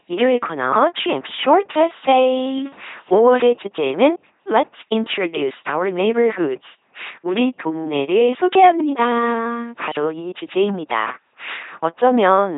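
From start to finish the speech runs through an LPC-10 vocoder, heavily damaged, with the buzzy, mechanical quality of a coder working at roughly 2.4 kbit/s. Each frame is rebuilt from a short filter excited by either a pulse train or noise, so the sound turns robotic, with stray buzz or hiss where the voicing choice slips. A spectrogram shows nothing above 3.8 kHz, evenly spaced pulse harmonics in voiced stretches, and filter-shaped noise elsewhere.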